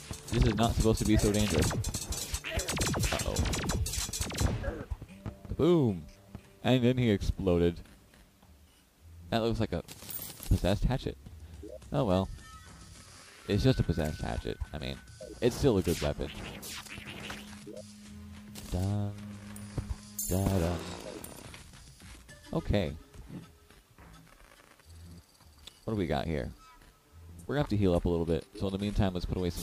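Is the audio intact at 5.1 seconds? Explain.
No. From 5.10 to 5.14 s a corrupt frame is decoded: bits in one compressed frame were flipped, yet the decoder still played it, so misread gains and codes put energy at the wrong frequencies for that single 40 ms frame. It sounds like a brief chirp or noisy blip, faint, peaking around -45 dBFS. Unlike a concealed lost frame, the sound doesn't smear; something wrong is added instead.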